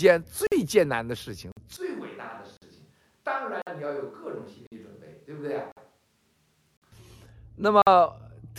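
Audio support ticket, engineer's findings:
Gap between chunks. 50 ms holes at 0.47, 1.52, 2.57, 3.62, 4.67, 5.72, 6.77 and 7.82 s. They recur every 1.05 s: one second of audio, then a silent gap. Nothing is missing, but the speech is broken at each join. Component: the chunked delivery or playback path. Mechanism: padding at chunk boundaries, or a player starting each 1 s chunk late.

Switch to a distant microphone, 1.77 to 6.92 s. The voice turns roomy and hollow at once, with thinner bass. It drops by about 10 dB, and room noise sits roughly 35 dB under the speech. The change is abrupt at both ends. Component: likely the close mic failing or being dropped, with a farther source such as a camera mic covering that stretch.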